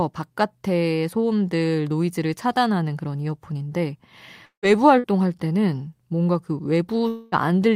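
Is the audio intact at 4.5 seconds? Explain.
No. From 4.45 to 4.66 s there is a long network dropout: the stream likely stopped delivering audio packets for about 0.2 s, and the receiver had nothing real to play. It stretched the last sound into a fading buzz for roughly 170 ms, which sinks into about 110 ms of near-silence before the audio resumes. About 180 ms of the original sound is simply gone, so the audio picks up further along.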